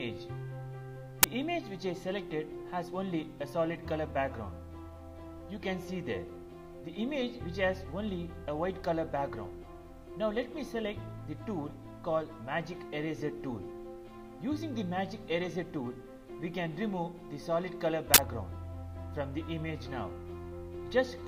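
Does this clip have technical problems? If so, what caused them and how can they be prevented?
Yes: an uninitialised buffer produces a crack at 1.23 s and a 40 ms burst of digital noise from 18.14 to 18.18 s, where leftover memory was played as samples. Prevent it by zero-filling every buffer before playback.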